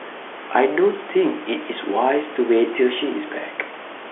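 Nothing's wrong with this speech clip: it has the narrow sound of a G.711 phone line, topping out a little above 3.4 kHz, with some room noise sitting about 15 dB under the voice.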